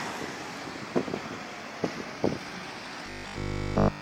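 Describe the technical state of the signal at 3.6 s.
At 3.6 s the signal is inside a stretch of robotic sound from repeated short buffers, running from 3.06 s to the end of the clip at 4.02 s. The likely cause is new audio arriving too seldom, so the software loops a 20 ms slice and skips essentially all of the real signal. This imposes a rigid metallic 50 Hz buzz. A spectrogram shows evenly spaced horizontal lines every 50 Hz, and the waveform shows identical 20 ms cycles repeating.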